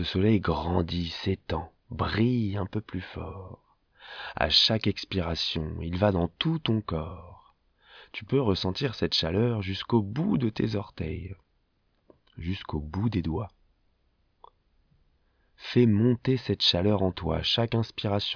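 No technical faults occur anywhere in the speech, so there is nothing to describe in time order.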